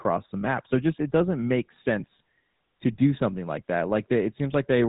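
GSM full-rate codec damage runs through the whole clip, from start to finish. The speech has been squeezed through the original GSM mobile-phone codec, which models the vocal tract as a filter and excites it with a sparse train of regular pulses. Nothing above about 3.8 kHz survives, so the sound is narrow and muffled, and the pulse-based excitation gives it a plainly audible buzzy, gravelly roughness. This fits a bitrate of around 13 kbps.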